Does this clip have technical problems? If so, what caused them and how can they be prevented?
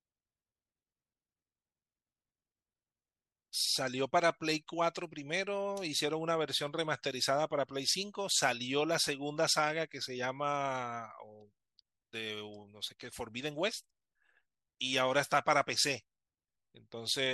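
No, nothing in this speech recording points to a technical fault, so there is no cause to trace and nothing to prevent.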